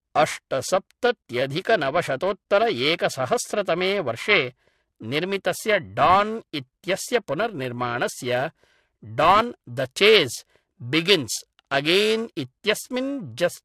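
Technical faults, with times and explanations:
Throughout, MP3 compression: nothing above 11.2 kHz, so the speech sounds dull, with a watery, swirly texture as weak detail flickers in and out. That's most likely a low-bitrate MP3 encode, somewhere around 50 kbps, starving the upper bands of bits.
Throughout, periodic clock jitter: there's a rough, metallic edge riding on the speech and dropping out in the pauses. The converter clock is being wobbled at around 1 kHz, putting sidebands on every component, and they bite hardest on the brighter sounds.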